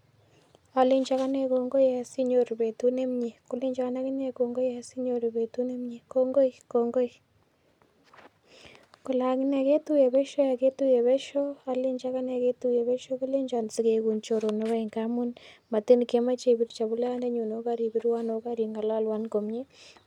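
No technical faults can be heard anywhere in this recording.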